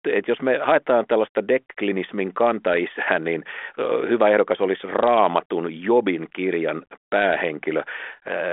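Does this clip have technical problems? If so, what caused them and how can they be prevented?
No, the clip has no technical problems.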